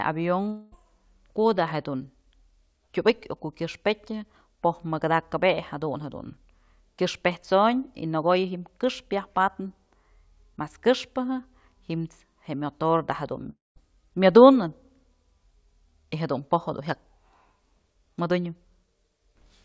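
Long network dropouts occur at 0.48 to 0.74 s and 13.50 to 13.78 s, likely from packets that never arrived. Each time, the receiver stretches the last sound into a fading buzz for about a quarter of a second. The first gap is fully covered by that fill. The second decays into about 180 ms of silence before the audio resumes, and the missing stretch is simply gone. Throughout, nothing is heard above 8 kHz, which fits a G.722 call codec.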